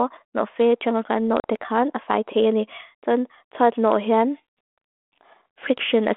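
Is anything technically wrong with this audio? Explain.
Yes, there's a packet loss dropout on what sounds like a G.726 ADPCM call at 32 kbit/s. From 1.40 to 1.45 s, about 40 ms (a couple of packets) drops to hard silence. The decoder's predictor and step size lose track of the sender's, so the speech comes back with "kan a fai trene" with brief, slight distortion that settles quickly.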